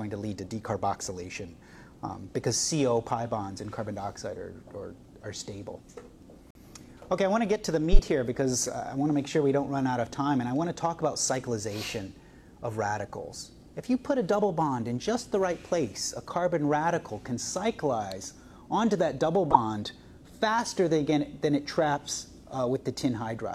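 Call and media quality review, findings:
Corrupt frame muted, 6.51–6.61 s. Abrupt 0.1 s dropout to silence. Timing intact after the gap. Probable component: decoder and player loss concealment. A damaged compressed frame was rejected and replaced with silence. Length points to a single lost frame.

Corrupt frame decoded, 7.77–7.99 s. Harsh artifact, about 0.22 s, peaking near -5 dBFS. Probable component: decoder. Bit errors in several consecutive frames were decoded anyway. Misread gains and codes put loud energy at wrong frequencies.

Corrupt frame decoded, 19.51–19.56 s. Short loud artifact, about 50 ms, near -5 dBFS. Same mechanism. Points to one damaged frame played through without rejection.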